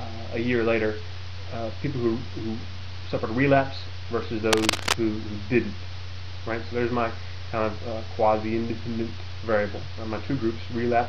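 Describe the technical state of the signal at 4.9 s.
At 4.9 s the signal is inside a burst of cable scratch noise from 4.52 to 5.0 s. A worn cable, connector or DC-carrying control was likely moved, making its contact resistance jump rapidly. The resulting dense, uneven noise, roughly as loud as the audio, scratches and rustles over it.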